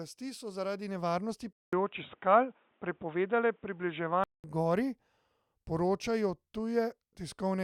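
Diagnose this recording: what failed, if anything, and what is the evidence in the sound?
Input switched to a poorer device from 1.53 s to 4.44 s, likely at the driver or device stage. The speech goes dull above 3.8 kHz, with a 200 ms gap at the switch and a faint new noise floor, while the level stays about the same, then clears.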